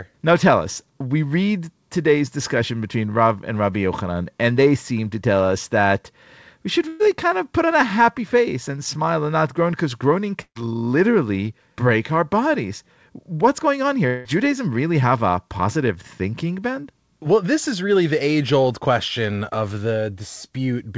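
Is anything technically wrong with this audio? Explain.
Yes, there are gaps where part of the speech disappears and is briefly replaced by synthetic sound. The audio passes through a call codec that fits G.722 at about 64 kbps, with nothing above 8 kHz.

Burst of packet loss, 6.88 to 7.01 s and 10.41 to 10.57 s: After "us that we should", the last sound smears into a held buzz or hiss for about 116 ms and speech resumes at "kind of put on". After "not groan because groaning", a similar 137 ms fill fades away, ending in about 70 ms of silence before "literally break our bodies". In each case about 120 to 140 ms of audio never arrived, and the receiver stretched the final sound while turning it down to cover the hole.

Long network dropout, 14.07 to 14.27 s: Right after "going on", the sound freezes into a fading buzz or hiss for about 176 ms, and then the speech picks up farther along. Roughly 180 ms of material is skipped. 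The likely cause is a stretch where no packets reached the receiver, so it extended the last audio it had until the stream returned.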